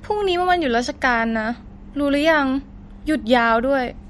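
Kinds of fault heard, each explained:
MP3 compression: the encoder likely ran short of bits, which fits a rate below about 50 kbps, so it cut all treble above 11.9 kHz and dropped weak frequency lines frame by frame, leaving the speech dull and watery with plainly audible swirling.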